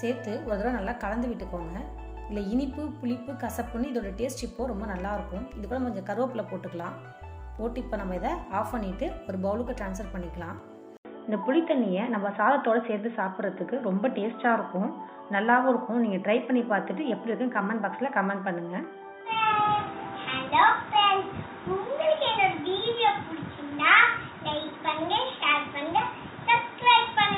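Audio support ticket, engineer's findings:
10.97 s to end: 80 ms dropout, then dull, boxy audio with nothing above 3.8 kHz, a level shift of a few dB and a new, faint noise floor. Likely input switched to a poorer device. Spectrogram: hard 3.8 kHz ceiling from 10.97 s. Waveform: flat gap, then stepped envelope.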